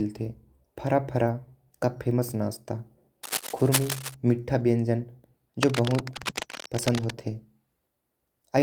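Right after "फारा का फेमस नाश्ता", from 3.23 to 4.15 s, a dense, uneven rustling scratches over the speech, nearly as loud as the voice. It returns, quieter, from 5.63 to 7.14 s. This is cable scratch noise, likely from a worn cable or connector shifting contact.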